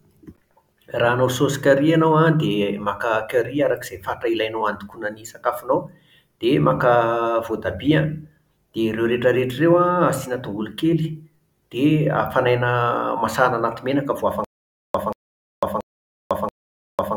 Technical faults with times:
14.44-17.16 stutter with silent gaps

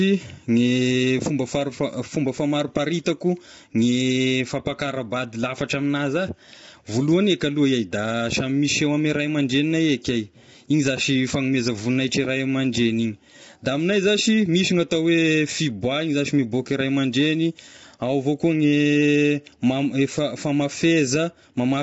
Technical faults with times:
0.00-21.83 low-delay AAC compression

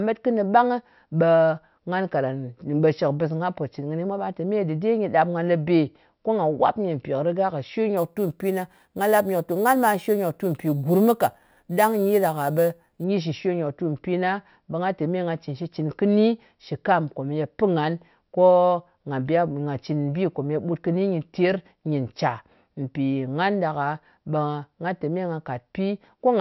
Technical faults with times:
7.97-13.04 imaging from sample-and-hold upsampling

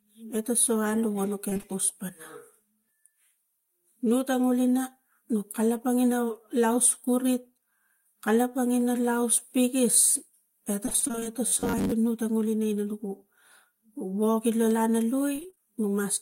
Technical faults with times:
1.49-1.65 repeated packet loss (robotic sound)
10.85-11.27 repeated packet loss (robotic sound)
11.47-11.94 robotic sound from repeated short buffers
15.35-15.60 repeated packet loss (robotic sound)

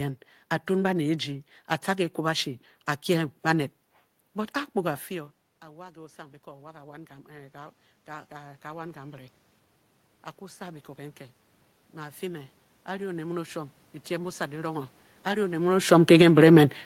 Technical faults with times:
5.09-9.39 automatic gain rising
10.57-16.75 automatic gain rising

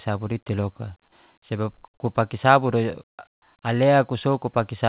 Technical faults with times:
3.34-3.42 comfort noise in place of the background

